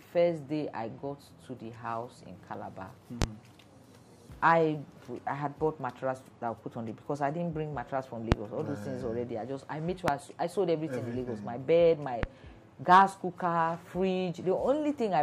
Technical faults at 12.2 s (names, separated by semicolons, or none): loud pop